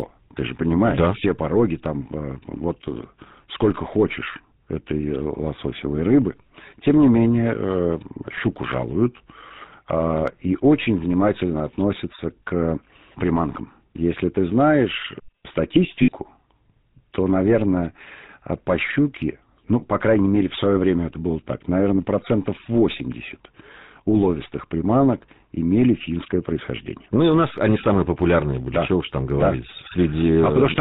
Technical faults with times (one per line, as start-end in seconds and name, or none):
0.00-30.80 GSM full-rate codec
16.02-16.11 lost GSM frames